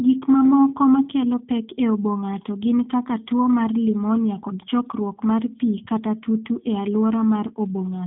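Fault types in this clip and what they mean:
G.729 codec: low-rate speech coding rebuilds the voice from a model, leaving a plainly rough, synthetic edge and nothing above 3.9 kHz, unlike simple band-limiting, which stays smooth.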